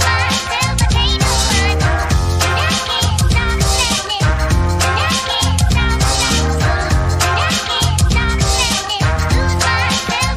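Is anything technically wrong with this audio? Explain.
No, nothing technically wrong is audible anywhere in this audio.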